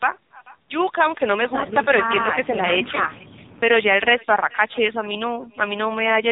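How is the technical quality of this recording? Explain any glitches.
Pretty rough, honestly: two problems run through the whole clip.

Echo with no canceller: the far end's loudspeaker feeds its mic, so the speech returns roughly 0.4 s later, about 24 dB down, and thin.

AMR narrowband mobile codec: nothing above 3.8 kHz survives, and heavy coding leaves a buzzy, synthetic voice, which fits a very low bitrate around 5.9 kbps.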